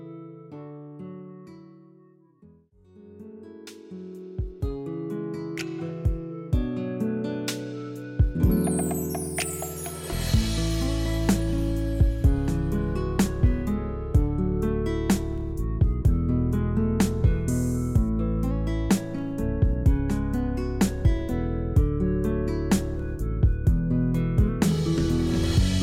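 No technical faults are audible.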